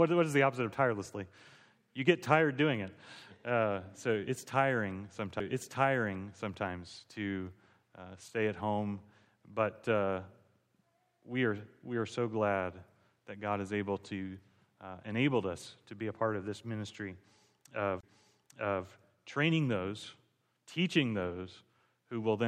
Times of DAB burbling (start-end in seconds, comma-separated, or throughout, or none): none